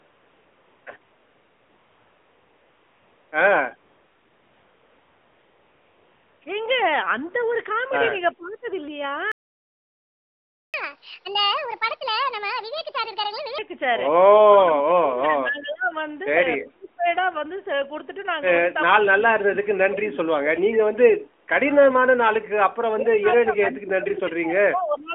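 AMR comfort noise fills 0 to 0.86 s, 1.02 to 3.32 s and 3.76 to 6.42 s. No speech frames were sent in these gaps. The receiver made up a steady, smooth hiss in their place. It switches in and out.

Speech suppressed in double talk hits 8.33 to 8.64 s, 14.52 to 15.95 s, 16.67 to 17.06 s, and 22.69 s to the end. The level dips by about 20 to 25 dB. The cause is likely an echo canceller ducking the talker while the far side spoke.

A playback stall runs from 9.32 to 10.74 s. The sound stops dead for 1.42 s. The player most likely starved of data.

Catch-up at higher speed follows, from 10.74 to 13.58 s. Playback runs at 1.5 times normal speed. Pitch rises by roughly seven semitones. Then both drop back to normal.

Throughout, the narrow 250 to 3400 Hz band and light coding texture fit AMR-NB at 12.2 kbps.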